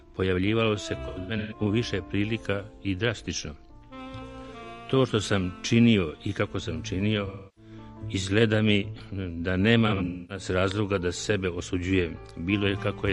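AAC frame loss with concealment occurs three times: 1.07 to 1.61 s, 7.26 to 7.71 s, and 9.87 to 10.45 s. Each time the decoder lost data and filled the gaps from the last good spectrum. The first and third are scattered dropouts, with runs up to around 150 ms and 300 ms. Each event totals about 0.3 s missing. The patches sound smeared, noisy and phasey. The longest run thins out before the sound returns.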